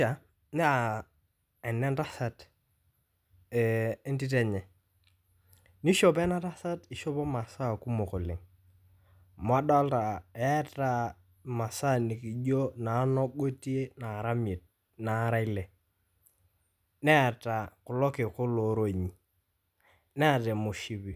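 No audible technical faults turn up anywhere in the recording; nothing calls for correction.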